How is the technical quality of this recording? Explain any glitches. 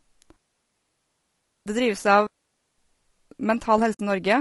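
Technical quality is poor. Three separate faults are audible in this speech recording.

Throughout, the speech sounds rough and grainy, with plainly audible coding damage. This is likely low-delay AAC compression of the AAC-ELD kind used for video calls. Its short frames resolve pitch harmonics poorly. At a low bitrate, perhaps around 32 kbps, noise fills the gaps between harmonics. The top band also sounds lowered or synthetic.

Two digital wireless dropouts cut the sound out. The first runs from 0.36 to 1.66 s, a silence of 1.3 s. The second runs from 2.27 to 2.78 s, about 0.52 s. In each, the wireless link lost too much data and the receiver muted. The fade is very short. The result is a clean hole of near silence. No noise burst comes before or after.

From 3.93 to 4.00 s there is an AAC frame loss with muting. About 60 ms of sound is missing, which fits three lost frames. The decoder set the lost spectrum to zero. 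The overlapping windows then faded the sound out and back in. This gives a brief, soft-edged gap.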